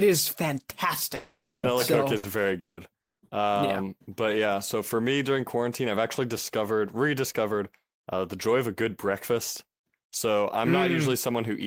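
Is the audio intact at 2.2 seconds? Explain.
No. From 2.17 to 2.26 s the speech stretches into a fading held sound, then jumps ahead. This is a burst of packet loss: about 60 ms concealed, 60 ms missing.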